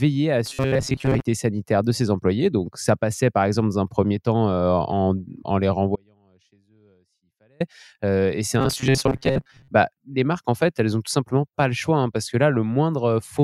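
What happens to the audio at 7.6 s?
At 7.60 s the speech returns abruptly on "et c'est", ending an audio dropout to a faint residue that began at 5.96 s. For about 1.6 s the signal is lost, leaving only a faint sound roughly 35 dB down, likely a break in the feed while the downstream path stayed live.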